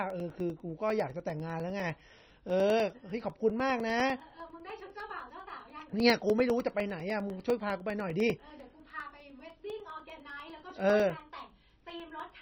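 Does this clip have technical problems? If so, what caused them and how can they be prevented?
Yes. The speech has nothing above 5.9 kHz and a heavily watery, swirling texture with smeared consonants, likely from MP3 compression at a very low bitrate, consistent with about 24 kbps, where weak frequency lines drop in and out between frames. Encoding at a higher bitrate prevents it.

Periodic USB or driver dropouts produce regular ticks every 0.1 s from 0.10 s to 12.3 s, well over a hundred in total, each a gap of about 2 ms replaced by silence when the bus or driver stalls. Removing the interfering background task or enlarging the audio buffer prevents it.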